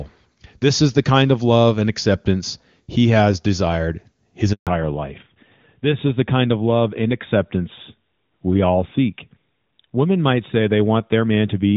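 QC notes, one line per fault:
4.53–4.67 s, handover gap: right after "he has desired his" the speech fades out fast and there's about 140 ms of dead air. That's the call hopping networks, with no speech frames getting through until the new link picks up, so whatever was said in there is gone.
4.67 s to the end, fallback to narrowband: once the link comes back, the top end is gone and nothing is left above 4 kHz, so the speech goes dull and a bit rough. Before the gap it had clean HD Voice quality consistent with AMR-WB around 23.85 kbit/s. Now it sounds like a step down to AMR-NB, likely at 12.2 kbit/s.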